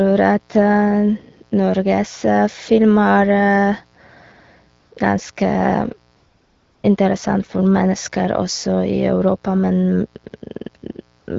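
A mains buzz runs under the whole speech clip. It sits roughly 40 dB below the signal. Its harmonics are spaced at 60 Hz, which points to a 60 Hz supply. Sharp switching spikes, twice per mains cycle, leak into the signal path. That is why the tone is a raspy buzz, not a soft hum. It stays steady from start to finish.

AMR comfort noise appears three times. The first is from 4.79 to 4.91 s and lasts 120 ms. The second is from 6.15 to 6.83 s and lasts 680 ms. The last is from 11.19 to 11.27 s and lasts 80 ms. Each time, the phone judged the talker silent and stopped sending speech frames. The receiver then filled the gap with synthetic noise. The real background, buzz included, gives way to smooth, even hiss. That hiss switches in and out at these edges. The wideband codec itself runs at 12.65 kbit/s with only light coding damage.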